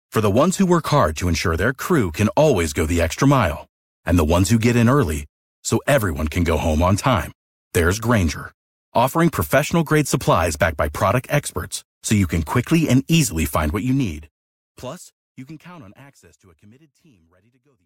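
Nothing here stands out as a technical fault; the speech simply eases out with a gentle editor's fade over roughly the last four seconds.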